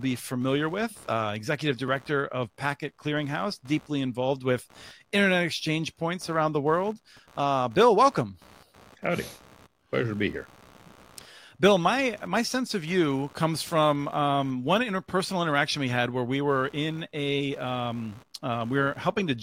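Computer activity noise runs through the whole recording: a faint buzzing pulse repeating roughly 70 times a second, sitting around 30 dB below the speech. Processor or peripheral load is disturbing the audio circuit's shared ground, so the buzz follows the machine's activity rather than the speech.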